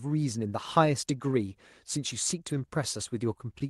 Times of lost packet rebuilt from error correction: 2.49-2.63

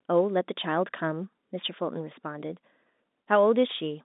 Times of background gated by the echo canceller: none

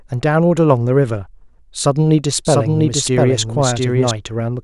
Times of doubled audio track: 2.45-4.11

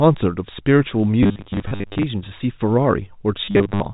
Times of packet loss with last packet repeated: 1.23-2.03, 3.45-3.80

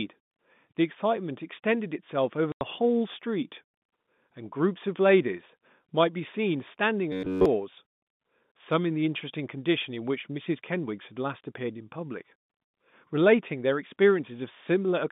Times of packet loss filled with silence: 2.52-2.61

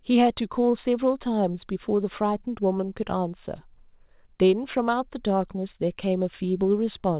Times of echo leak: none

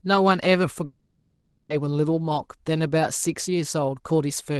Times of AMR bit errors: none

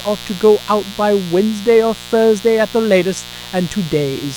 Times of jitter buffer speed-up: none

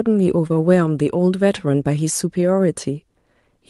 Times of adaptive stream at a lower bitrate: none

